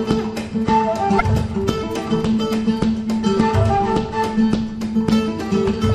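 At 1.16 to 1.22 s, about 56 ms of damaged data in a compressed stream makes the decoder misread frames and lose sync while it hunts for the next frame header, giving a brief glitch.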